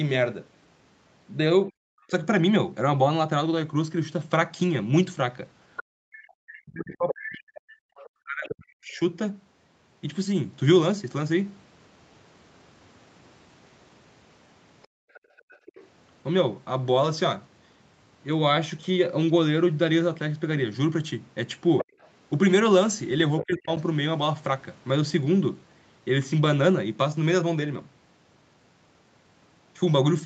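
At 1.69 to 2.13 s the speech is briefly pulled down, by roughly 30 dB at its deepest, for around a tenth of a second in total. This is speech suppressed in double talk, most likely because the echo canceller could not tell the near talker from loudspeaker echo while both sides were active, and attenuated everything.

From 5.76 to 8.99 s a second voice can be heard under the talker, roughly 10 dB below the speech. This is the other side's voice leaking through, likely residual loudspeaker echo the canceller failed to remove. Over the same stretch, 6.01 to 9.0 s, the near speech dips and breaks up for about two seconds in total, by as much as roughly 40 dB. This is again speech suppressed in double talk, likely the canceller clamping down while the far end played. Within that, at 7.78 to 7.83 s, the room tone drops out by about 34 dB for a brief moment. This is background gated by the echo canceller muting the microphone.

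At 14.83 to 15.88 s faint leakage of the other side appears, roughly 30 dB down, likely an echo remnant. The background is gated from 14.88 to 15.66 s, by about 40 dB, for most of that span.

At 21.78 to 23.57 s the far voice leaks through again at roughly 10 dB below the speech, likely uncancelled echo. The talker is then suppressed in double talk at 23.42 to 23.7 s, dipping by roughly 20 dB.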